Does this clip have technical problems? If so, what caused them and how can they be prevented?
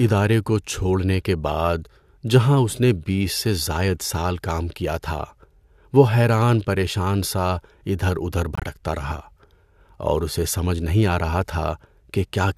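Yes. Flipped bits in the compressed stream made the decoder reject a short run of frames, and the player put silence in their place. This corrupt frame muted fault leaves an abrupt hole from 8.55 to 8.64 s, about 84 ms, which fits roughly three codec frames, and the surrounding timing stays intact. Checksums with forward error correction on the transport, plus decoder-side concealment that interpolates across rejected frames, would prevent it.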